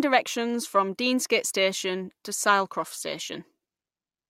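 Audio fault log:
Nothing to log here, since the speech comes through without any audible faults.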